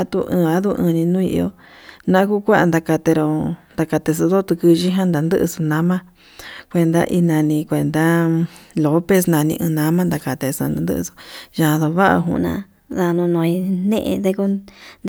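From 9.14 to 11.83 s the speech turns suddenly thin, bright and hissy, with sibilants spitting forward and the body of the sound receding. This is pre-emphasis left on: the treble boost applied before recording or transmission was never undone by the matching de-emphasis on playback. The tilt follows the CD 50/15 µs curve, leaving 10 kHz about 8 dB hotter relative to 1 kHz than it should be.

At 12.36 s the speech jumps up in pitch and hurries along, staying high and quick until the clip ends at 15.09 s. This is a section at the wrong speed: the passage plays at 1.12 times its proper rate, so pitch and tempo rise together, lifting the speech by about two semitones. The likely cause is that this stretch was rendered or played against the wrong clock rate.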